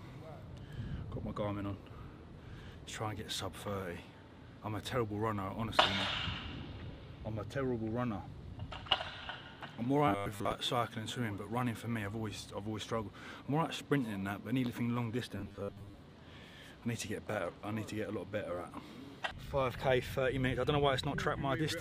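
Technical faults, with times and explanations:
10.08–10.55 s, robotic sound from repeated short buffers: the sound turns into a rigid, metallic buzz locked at 100 Hz, with about half of the material replaced. The likely cause is input arriving too seldom, so the output keeps looping the last 10 ms segment, and that loop rate sets the fixed pitch.
15.36–15.96 s, robotic sound from repeated short buffers: the same 100 Hz buzz returns more heavily, with most of the audio likely replaced by the repeated 10 ms segment, so the original contour is harder to follow.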